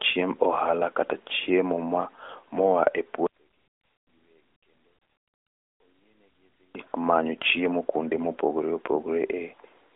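Speech on a narrowband mobile line, with nothing above about 3.8 kHz, as AMR-NB at 12.2 kbps would leave it. From 3.27 to 6.75 s the speech drops by about 41 dB to a faint residue, likely because one channel is inverted and the centred sound cancels when summed to mono. Unlike a dropout, a faint trace remains instead of silence.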